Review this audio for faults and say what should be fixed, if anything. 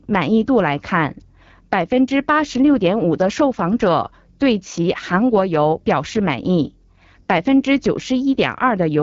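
The speech was carried through the AMR wideband (HD Voice) codec at one of its lowest modes, with rough, raspy damage that fits about 8.85 kbit/s, running for the whole clip. At that rate the pulse-excited vocal tract model is too coarse to follow the voice, so it comes out gritty and buzzy. The band above 6.4 kHz is filled with shaped noise, and nothing reaches past 7.5 kHz. To prevent it, negotiate AMR-WB at 12.65 kbit/s or higher.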